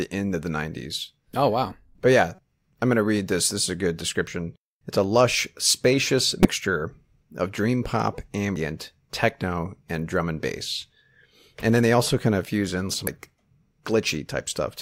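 At 2.35 to 2.39 s, about 34 ms, the speech is broken by damaged data in a compressed stream. A stretch of the encoded file was corrupted. The decoder could not read those frames properly, lost sync and hunted for the next valid frame header. The result is a brief glitch, a chirp, squawk, click or gap. It happens again at 6.42 to 6.45 s, about 38 ms, just after "lush spacious".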